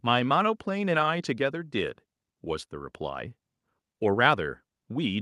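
No technical faults can be heard anywhere here.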